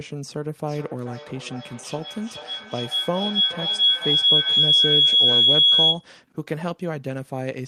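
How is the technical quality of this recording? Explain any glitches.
Poor, because of one serious fault. From 0.68 to 6.15 s, a microphone-to-loudspeaker loop kept adding gain, causing feedback howl: a piercing tone around 3 kHz, with the loop repeating roughly every 0.4 s, peaking about 10 dB above the speech.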